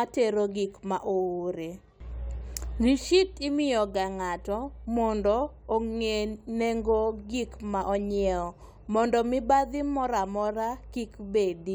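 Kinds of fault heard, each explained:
No technical faults can be heard anywhere in this speech recording. Nothing in the audio points to a problem in how it was captured, processed or delivered.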